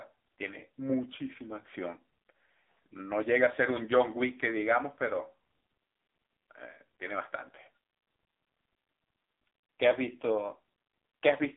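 From start to finish the speech runs through the AMR narrowband mobile codec, its buzzy, synthetic texture pointing to a low mode near 6.7 kbps. Harmonics sit within roughly 250 Hz to 3.6 kHz, and a spectrogram shows a flat, empty ceiling above 3.8 kHz.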